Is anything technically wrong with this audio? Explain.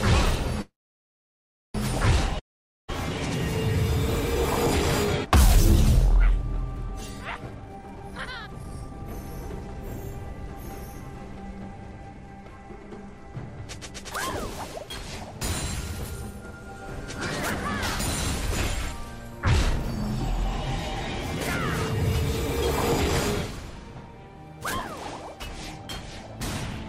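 Yes, there are three network-related problems here.

From 0.61 to 1.76 s there's a call audio freeze: the sound stalls, trails off into a short fading buzz, then sits silent for about a second before resuming right where it stopped. It's likely delayed packets draining the jitter buffer, so nothing's lost, but everything after lands about 1.13 s late.

At 2.39 to 2.98 s you get a long network dropout. The last sound smears briefly, then nearly half a second of silence, and when audio returns about half a second of content is simply gone, likely because those packets never arrived.

From 7.49 to 10.34 s there's a jitter buffer speed-up. The receiver trims tiny pitch-period slices over and over to shed about a second of backlog, so the audio runs at roughly 140% speed with unchanged pitch and sounds noticeably rushed.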